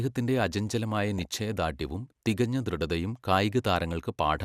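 A speech recording with a short stretch of DAB burbling from 1.08 to 1.25 s: short noise blips in single sub-bands as weak reception lets bit errors slip past error correction and throw individual sub-bands off, across 11 frames.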